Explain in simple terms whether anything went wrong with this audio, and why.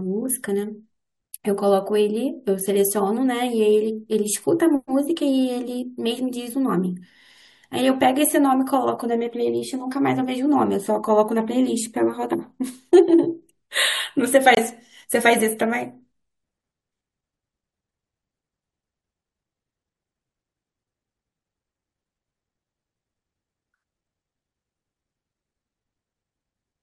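One fault, a corrupt frame muted, occurs at 14.55 s in this speech. The audio cuts out for about 40 ms, ending at 14.59 s. A damaged block of compressed data was rejected during playback and replaced with silence, which is what one lost frame sounds like.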